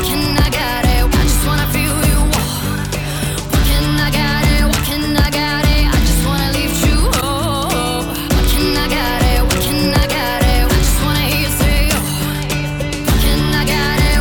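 At 7.17 to 7.23 s and again at 12.76 to 12.82 s, damaged data in the compressed stream makes the decoder misread frames and lose sync, giving brief glitches. Each appears as a roughly 56 ms disturbance on the spectrogram and a jagged discontinuity in the waveform.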